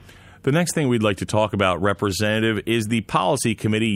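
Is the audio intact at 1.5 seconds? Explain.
Yes, at 1.5 seconds the speech plays through cleanly, with no dropout, click, distortion or other break.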